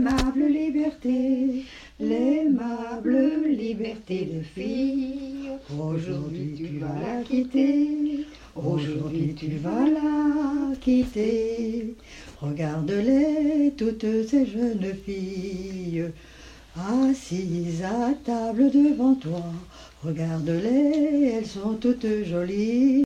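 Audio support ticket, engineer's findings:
No faults found on listening; nothing to escalate from the audio. No working path is listed to comment on beyond that.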